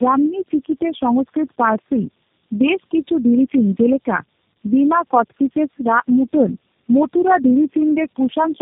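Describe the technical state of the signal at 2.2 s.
At 2.2 s the signal shows tandem speech coding, a fault present across the whole clip. The speech has passed through several low-rate speech coders in series, each re-encoding the already degraded output of the one before, so the errors stack. The result is rough, muffled and warbly, with nothing above 3.8 kHz. The character points to four coders in a row, which fits a chain such as G.726, G.729A, AMR-NB and G.729A.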